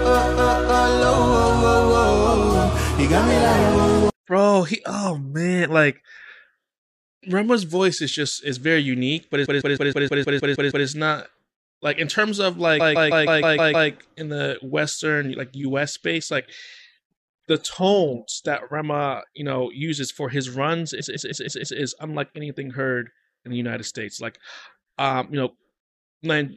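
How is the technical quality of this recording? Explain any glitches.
The recording has three stutters caused by repeated frames. At 9.45–10.86 s, 12.79–13.89 s and 20.99–21.78 s, a run of compressed frames was delivered several times over. A 157 ms slice replays nine, seven and then five extra times, stretching the audio by about 1.4, 1.1 and 0.8 s.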